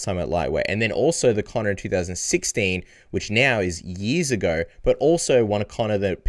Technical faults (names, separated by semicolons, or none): none